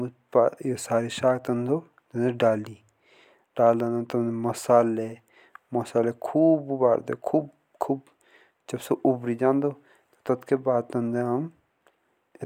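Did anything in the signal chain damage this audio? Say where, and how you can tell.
Yes, at playback from disc: CD scratch ticks in the speech between 9.62 and 10.48 s. Five short ticks, the longest about 1.5 ms, fall at an even spacing of roughly six per second. A surface blemish passes under the laser once per revolution and corrupts more data than error correction can repair, so the player conceals the samples. That steady revolution-locked rhythm separates it from irregular buffer-underrun clicks or random vinyl crackle.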